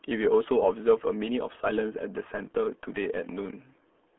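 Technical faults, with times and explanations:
Throughout, RealAudio 14.4 codec: the speech sounds muffled, gargly and boxed in, held to roughly 200 Hz to 3.4 kHz with nothing above 3.8 kHz. The heavy smearing of vowels and consonants fits a very low-rate dial-up codec around 8 kbit/s.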